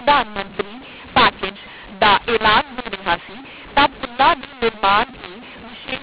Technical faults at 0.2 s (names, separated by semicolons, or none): mu-law and A-law mixed up